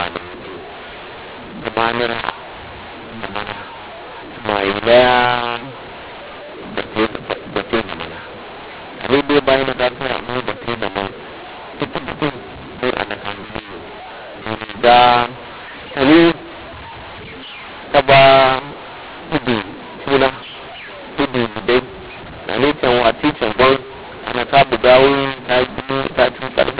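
A speech clip on a telephone line, with a mu-law and A-law mix-up running the whole way through. The audio was encoded as mu-law but decoded as A-law, so the levels are scrambled: the speech comes out harsh and distorted, and the quietest samples get pushed well above silence, filling the pauses with noise. Underneath, the G.711 coding itself sounds normal, with nothing above 4 kHz, which fits 8 kHz telephone sampling.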